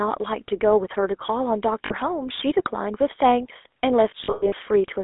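The whole clip carries GSM full-rate codec damage, clearly audible as a buzzy, gravelly texture on the speech. The codec rebuilds the voice from a vocal-tract model and a sparse pulse excitation, which fits a 13 kbps full-rate stream. The band runs only from 300 Hz to 3.6 kHz.

At 1.86 s, lost GSM frames cause a brief hold of about 40 ms, consistent with two missing frames. The decoder repeats the last good frame's settings, so the sound rings metallically before normal decoding resumes at 1.92 s.

From 4.24 s to 4.53 s a heavier cluster of lost frames, about 220 ms in total, is scattered over roughly 280 ms. The longest gap is about a tenth of a second, held as a rough, metallic ring.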